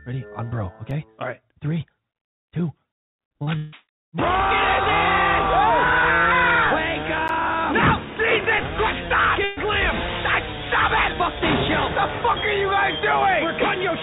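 At 0.91 s a block of digital silence lasting about 3 ms drops into the audio, which fits a 128-sample buffer that was not filled in time. The signal snaps to zero and back with no fade, so it comes across as a single tick. On a waveform it is a tiny flat line with abrupt edges, and a spectrogram shows a thin vertical broadband stripe where the edges click.

At 3.28 to 3.31 s and again at 3.43 to 3.49 s, short concealed packet loss occurs. About 20 ms and then 40 ms of audio never reached the decoder in time, and the receiver covered each hole by extending the preceding sound before blending back. Each sounds like a brief smear or wobble. A spectrogram shows harmonics or noise stretched unnaturally smooth across the gap, and the waveform repeats itself rather than going flat.

From 3.57 to 3.74 s a longer stretch, about 160 ms, is missing, most likely a network dropout. The last sound is drawn out as a fading buzz or hiss for the whole gap, with no true silence, and the audio then resumes further on. 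A spectrogram shows frozen, decaying bands where detail should change. The waveform shows a repeating pattern shrinking in amplitude, then a jump in character where real audio returns.

At 7.28 s a second block of digital silence, about 12 ms long, fits a 512-sample buffer that went unfilled. Though longer, it is still under 15 ms, so it is heard as a tick or dip rather than as a hole. The waveform shows a clear flat run bounded by vertical steps, and the spectrogram shows an empty gap flanked by two broadband click lines.

From 9.44 to 9.59 s a burst of packet loss removes about 120 ms. The receiver held the last sound and turned it down as the gap went on, so it is heard as a held buzz or fading hiss before the audio resumes with the middle part missing. A spectrogram shows horizontal bands fading out, all of it below the 4 kHz ceiling the G.711 call path imposes, and the waveform shows periodic, decaying repetition.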